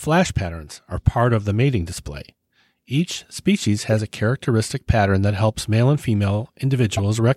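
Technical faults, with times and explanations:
3.92 s and 6.97–6.99 s, corrupt frame decoded: compressed frames arrived with flipped bits and the decoder played them anyway, so misread codes and wrong gains placed energy at the wrong frequencies. Each event lasts only about 20 ms, which points to roughly two damaged frames. It comes through as a brief spurious chirp, squeak, blip or noise burst. The first sits just before "a characteristic pattern that", and the second is louder.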